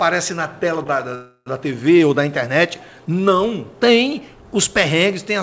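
At 0.84 to 0.87 s there is a short stall from a late packet. One packet did not arrive in time, and the jitter buffer ran dry. The receiver stretched the last sound by about 15 ms to cover the wait. Then the audio picked up exactly where it left off. Nothing is lost. You hear one sound held a touch too long, with a faint buzz or dip. The timing after it is shifted by 15 ms.

From 1.15 to 1.48 s comes a call audio freeze. The sound stops moving forward and turns into a fading buzz or hiss that runs for about 314 ms. It ends in a brief silence of about 20 ms. Then the audio resumes from the same point, so a gap has been inserted and nothing is missing. Everything after it lands 314 ms later. The likely cause is packets held up in the network, leaving the jitter buffer empty. The band-limited call sound, with nothing above 8 kHz, fits the G.722 codec at 64 kbps.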